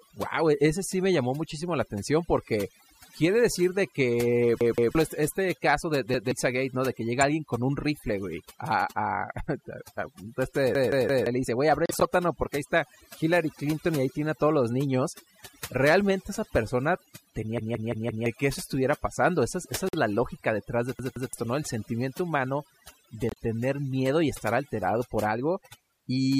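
Overdone noise removal runs through the whole speech clip. The noise reduction was set too hard. It cuts narrow frequency bands whenever they sit near its noise estimate. Soft parts of the voice vanish along with the hiss. Pauses fall to near silence with faint twinkling specks.

The first repeated buffer comes at 4.61 to 4.95 s, after "decir de que". Fresh audio was late, so the player looped the last block. Each repeat lasts about 171 ms, which fits an 8192-sample buffer. Here it plays two extra times. A short stutter with hard joins results, and roughly a third of a second is lost. Another follows at 6.14 to 6.32 s, after "este este caso del". It repeats once.

A corrupt frame decoded at 7.21 to 7.23 s gives a brief glitch. Damaged bits made the decoder put energy at wrong frequencies.

At 10.75 to 11.26 s the buffer repeats three times. That is about half a second of stutter.

At 11.86 to 12.05 s several corrupt frames play in a row. 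The burst is loud, peaking at about -5 dBFS.

At 17.58 to 18.26 s the longest stutter falls between "esa persona" and "que eso estuviera pasando". It repeats four times.

Quieter corrupt-frame glitches follow at 19.89 to 19.95 s. A last buffer stutter at 20.99 to 21.33 s repeats twice. A final corrupt-frame glitch comes at 23.29 to 23.38 s, spanning a few frames.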